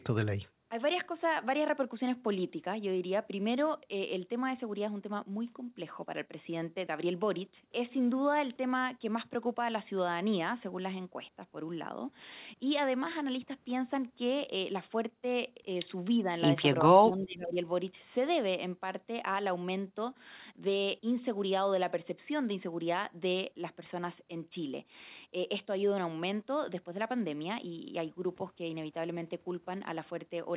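At 16.19 to 16.32 s the speech dips slightly. A deeper cut follows from 16.82 to 17.57 s, where the level falls by roughly 20 dB and the speech nearly vanishes. The likely cause is speech suppressed in double talk. The echo canceller heard both sides at once and could not tell this talker from loudspeaker echo, so it turned everything down. The band stays narrow throughout, with nothing above 4 kHz, which fits a telephone-grade call codec.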